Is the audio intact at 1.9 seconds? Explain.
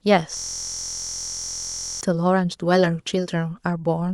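No. From 0.37 to 2.01 s a system hang loop is under way: the computer froze while the sound hardware kept replaying one 23.22 ms ring-buffer segment, which fits a 1024-sample buffer. That exact repetition replaces the speech with a steady 43.1 Hz buzz.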